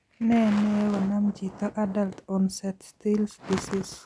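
No audible technical faults in this recording.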